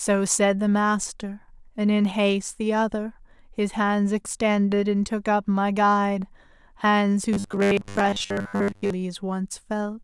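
A speech clip where, from 7.33 to 8.90 s, most of the audio turns into robotic sound from repeated short buffers: a rigid 100 Hz buzz, likely from 10 ms chunks being looped while fresh audio arrives too slowly.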